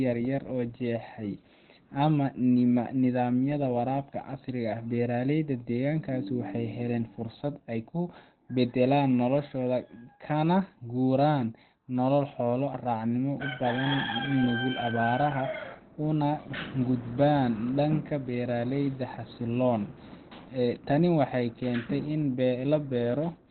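Speech, muffled and hoarse throughout with nothing above 4.4 kHz; likely Opus compression in its narrowband SILK speech mode, consistent with a bitrate near 12 kbps.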